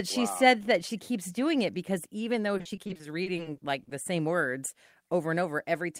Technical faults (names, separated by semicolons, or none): repeated packet loss (robotic sound)